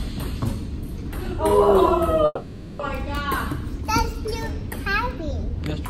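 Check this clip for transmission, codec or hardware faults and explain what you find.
One fault is present: a long network dropout from 2.25 to 2.81 s. Audio likely stopped arriving for more than half a second. The receiver had nothing new to play, so it kept extending the last sound it held to cover the gap. That concealment fills about 540 ms and is heard as a fading buzz or hiss. It is followed by roughly 10 ms of silence before the audio picks up again, with the lost stretch simply missing.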